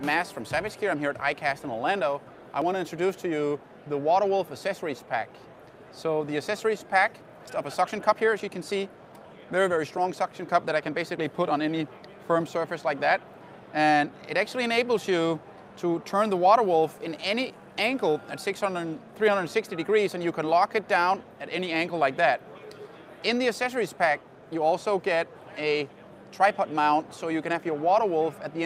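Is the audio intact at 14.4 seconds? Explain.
Yes, at 14.4 seconds the audio is intact, with no dropout, click, distortion or other fault at that moment.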